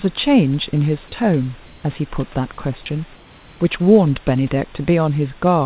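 At 1.66 s the room background drops out for 180 ms. A steady, featureless hiss replaces it until 1.84 s. The same happens from 3.16 to 3.6 s, for 440 ms. This is comfort noise in place of the background. The likely cause is discontinuous transmission: the sender paused during silence, and the receiver filled the gap with synthetic noise. That fill sits about 1 dB below the real background. The real background, about 28 dB under the speech, loses its texture there, against audio that stops at 4 kHz.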